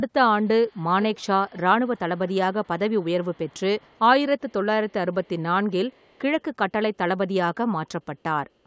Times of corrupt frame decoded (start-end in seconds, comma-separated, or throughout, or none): none